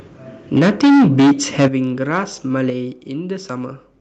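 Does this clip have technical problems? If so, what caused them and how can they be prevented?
Yes. Microphone overload distorts the sound from 0.55 to 1.32 s and again from 1.59 to 1.67 s. Peaks exceed the converter's limit by about 12 dB and then about 7 dB. A large share of samples have their tops sliced off, giving a harsh crackle. The likely cause is microphone input gain set far too high. Lower the input level so peaks stay well below full scale.

The microphone volume is stepped down at 0.59, 1.68 and 2.70 s. The drops are about 2, 10 and 5 dB. Each is a sudden fall in the level of the sound and its background. The first two come right after overloaded peaks. This is likely the call software cutting the device's input gain in response to clipping. Set a safe input level beforehand and turn off automatic microphone adjustment in the call app.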